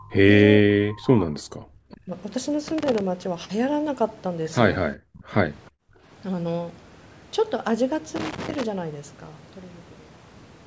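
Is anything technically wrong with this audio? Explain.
Yes, there are three kinds of fault in this speech clip.

Speech suppressed in double talk occurs at 0.00–0.29 s, 0.59–0.72 s, 0.96–1.71 s, 1.90–2.13 s, 5.25–5.30 s and 5.70–5.82 s. The speech is pulled down sharply in short chunks, by roughly 30 dB in the early stretch and nearer 40 dB in the two brief later dips, so it drops almost to nothing. The likely cause is an echo canceller that could not separate this talker from the far side's loudspeaker signal during overlapping talk, and so attenuated everything.

Loose connector crackle appears at 2.68–3.01 s and again at 8.16–8.63 s. A contact that keeps making and breaking chops the signal in rapid, uneven bursts. It sounds like scratchy, irregular crackle laid over the audio. That irregular texture separates it from suppression dips, which remove sound cleanly and leave no added noise of their own.

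Echo leak is heard at 5.14–5.23 s. It is a faint, brief, delayed copy of the speech, about 35 dB below the direct level and trailing it by 417 ms. It most probably leaked through a loudspeaker-to-microphone path that one side's canceller did not fully remove. The long, fixed delay and the repeated shape of the speech tell it apart from room reverberation, which would smear continuously and start immediately after the sound.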